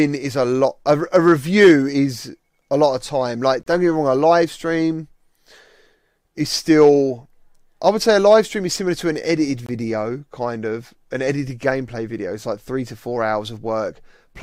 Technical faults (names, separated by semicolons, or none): hard clipping; gap between stream segments